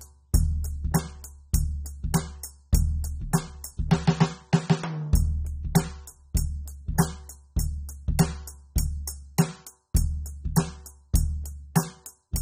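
It's a music clip with plainly audible AAC compression throughout: nothing above 16 kHz and a smeared, degraded top end. That's likely AAC-LC coding at a low bitrate, in the region of 24 kbps, starving the spectrum of bits and damaging the detail.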